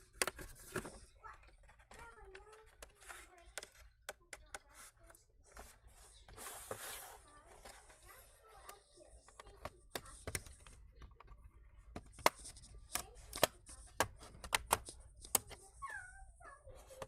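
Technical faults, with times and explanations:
2.13 to 2.23 s: short stall from a late packet. A packet arrived late, so the sound is held for about 30 ms with a slight buzz or dip. Nothing is lost.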